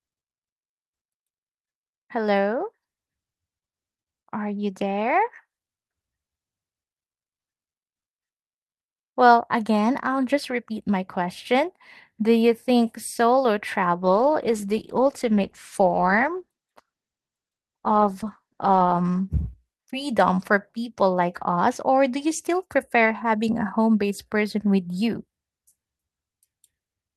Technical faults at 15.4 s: call bitrate drop

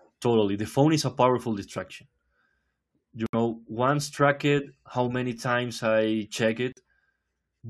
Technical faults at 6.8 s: corrupt frame muted

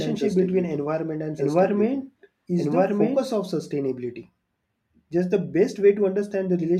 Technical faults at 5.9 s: none

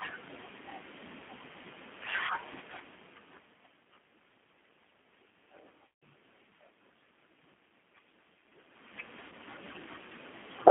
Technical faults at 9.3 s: G.729 codec; VoIP packet loss concealed by the speech codec

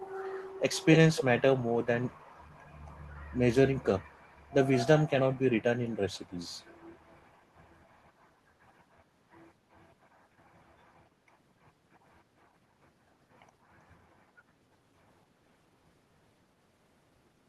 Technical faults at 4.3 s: echo leak

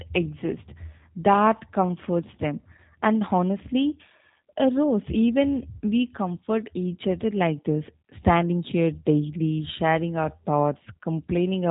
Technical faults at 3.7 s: G.729 codec

